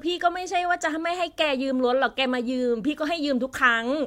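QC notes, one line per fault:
Nothing in this speech clip needs flagging. There are no times or events to log for it.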